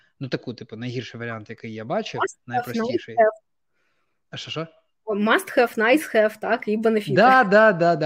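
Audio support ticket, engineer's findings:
Regular clicks every 1.82 s, about four, 1.58–7.04 s, starting after "таку типу найгірший варіант". Fixed spacing, not random dropouts: likely clock drift buffer slips, mismatch near 100 ppm, a few samples each.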